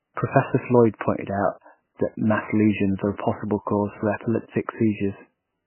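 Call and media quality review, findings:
Watery, swirling speech throughout the clip, with nothing above 3 kHz. Likely MP3 compression at a starved bitrate, near 10 kbps. Weak frequency lines drop in and out between frames. Unlike a clean low-pass, content below the cut-off also warbles and smears onsets.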